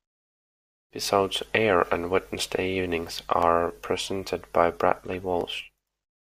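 A speech clip with four brief skips, each a small forward jump in the sound: at 1.42 s just before "air on", at 2.36 s just after "air on", at 3.43 s just before "presented by", and at 5.41 s. Each loses only around 5 to 10 ms, with the two sides spliced directly and no gap. This is likely a dropped buffer (overrun), where recording failed to read samples before the hardware overwrote them.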